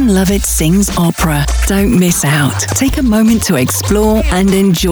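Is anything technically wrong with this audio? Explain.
Yes, there are two loud pops, at 1.10 to 1.12 s and 2.72 to 2.74 s. Each is a single short, sharp click sitting on top of the audio, which keeps going underneath. The first peaks a little above the surrounding level and the second stands out further. They sound like a sudden voltage jump, likely from a plug, switch, static discharge or driver hiccup, that the downstream circuitry turned into a brief pulse.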